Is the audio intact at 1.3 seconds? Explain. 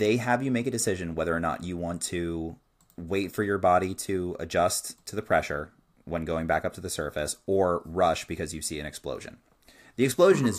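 Yes, at 1.3 seconds the speech plays through cleanly with no dropout, click, distortion or other audible fault.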